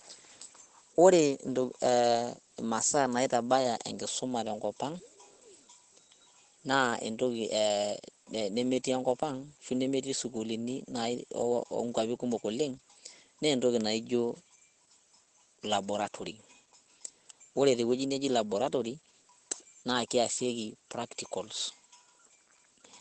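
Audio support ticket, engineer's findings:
Opus voice compression, whole clip. Speech muffled, hoarse, faintly robotic, plainly audible. Nothing above 8.6 kHz, which fits wideband SILK mode. Coarse excitation coding gives the rasp, and the damage level fits a rate near 12 kbps. Unlike a plain low-pass or resampling fault, the voice texture itself is degraded, not just the top end dulled. Component: encoder bitrate setting. Raise the rate so the coder keeps more detail.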